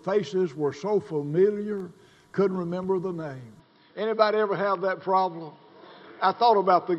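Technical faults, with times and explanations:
3.60 s to the end, input switched to a poorer device: the sound abruptly turns duller, with nothing above 5.5 kHz and a faint new background hiss, likely from a different microphone. The instant change with its own noise floor sets it apart from a filter or EQ change.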